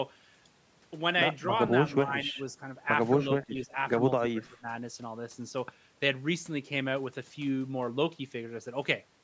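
The speech dips three times: 1.89 to 2.38 s, 3.47 to 3.76 s, and 4.2 to 4.67 s. Each time the level falls away in patches, by about 15, 10 and 20 dB, with the last dip deepest. This is likely speech suppressed in double talk. The echo canceller took the talker for loudspeaker echo and turned the voice down. The call microphone processing leaves nothing above 8 kHz.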